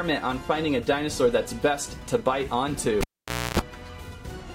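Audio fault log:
3.01–3.59 s, cable pulled and plugged in: a pop as the live lead comes out, about 0.53 s unplugged, with roughly 0.29 s of 60 Hz mains buzz within it while only the plug tip makes contact and picks up hum, and a second pop as full contact restores the sound.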